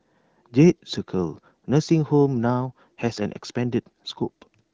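No technical fault can be heard in the recording. The speech carries only the light coding texture of the AMR wideband (HD Voice) codec, which fits one of its higher modes, around 15.85 kbit/s.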